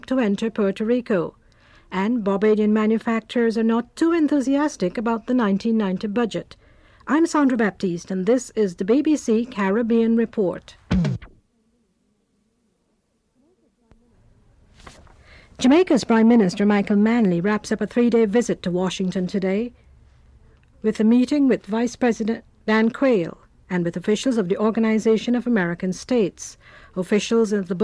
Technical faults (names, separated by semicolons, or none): none